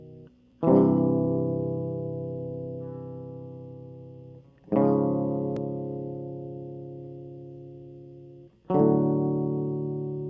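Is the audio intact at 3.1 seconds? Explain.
Yes, the music plays through 3.1 seconds intact, with no dropout, click, distortion or other audible fault at that moment.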